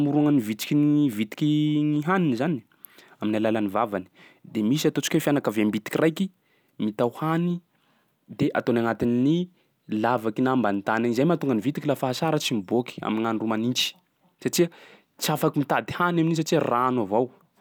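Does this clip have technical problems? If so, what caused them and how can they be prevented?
No, there are no technical faults to hear in this speech recording. With nothing gone wrong, there is no cause to trace and nothing that needs preventing.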